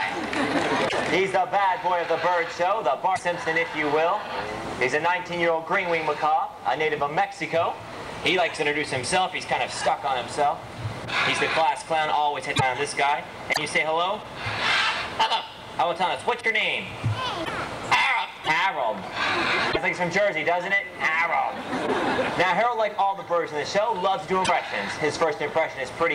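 Eight brief disturbances, each lasting about 55 ms, break the sound at 0.88, 3.15, 12.55, 13.52, 17.44, 18.43, 19.71 and 24.44 s. At each one the audio skips forward and the next fraction of a second comes out garbled. The likely cause is a broken MP3 bit reservoir: after frames went missing, the following frames, at 26.1 ms each, reached back for borrowed bits and decoded the wrong bytes for roughly two frames.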